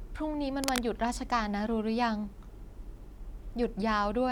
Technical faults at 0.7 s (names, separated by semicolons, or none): cable scratch noise